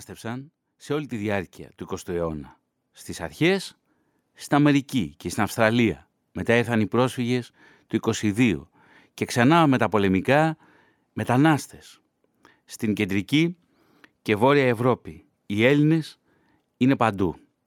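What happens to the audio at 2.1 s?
At 2.1 s the speech is in the middle of an automatic gain rise lasting from 0.2 to 8.33 s. The gain control judged the input too quiet and lifted it slowly, by about 10 dB in total. Voice and background noise swell together.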